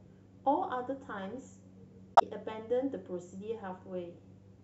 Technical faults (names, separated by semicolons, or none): corrupt frame concealed